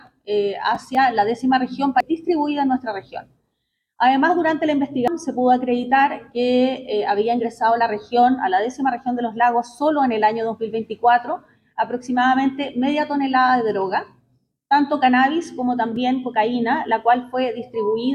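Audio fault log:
2.00 s and 5.08 s, damaged data in a compressed stream: brief blips where corrupted bytes threw the decoder off sync until it found the next frame header.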